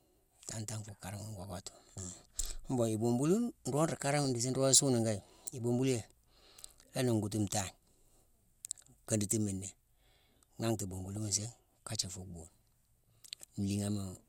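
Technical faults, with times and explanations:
1.32–1.97, 4.02–4.36, 6.17–6.63, 8.65–8.86, 10.80–11.25 (just before "nsiigh kajé") and 13.04–13.33 s, DAB burbling: the speech picks up short noise blips and level jumps because weak reception lets bit errors slip past correction, so single sub-bands jump in level for up to a frame.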